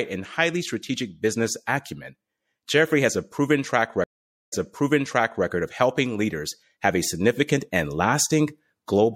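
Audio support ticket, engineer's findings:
Watery, swirly treble and dulled top end throughout, plainly audible. Likely MP3 compression; the bit-starved band cut and flickering weak lines fit roughly 64 kbps.

Stream reconnect, 4.04–5.46 s: dropout after "has a proven track", 0.48 s silence, fresh decoder restarts 0.94 s earlier, resend burst, before "of helping leaders have".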